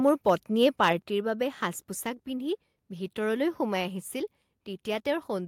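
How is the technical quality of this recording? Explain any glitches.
The recording has one glitch, a microphone volume step-down at 1.02 s, just before "বাবে সাজ". At that instant the whole speech signal, background included, falls by about 5 dB and stays at the lower level. The likely cause is call software judging the input too hot and cutting the device's microphone volume in a single move. What sets it apart from automatic gain control riding the level is the abruptness: no gradual fade, just one clean drop that never recovers.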